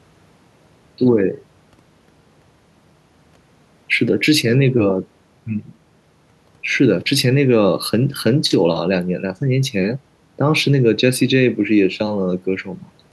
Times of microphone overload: none

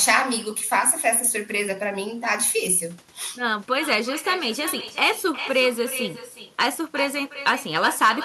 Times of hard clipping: 6.60-6.66, 7.46-8.12

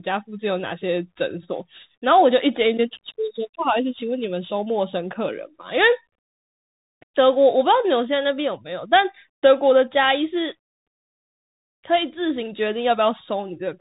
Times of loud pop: none

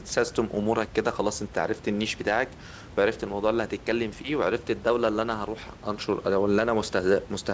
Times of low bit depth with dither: none

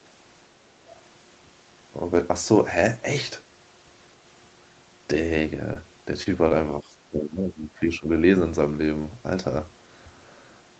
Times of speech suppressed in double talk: 6.81-8.09

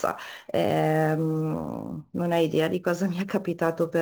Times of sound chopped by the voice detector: none

